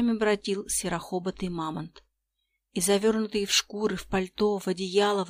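No technical faults can be heard anywhere in this clip.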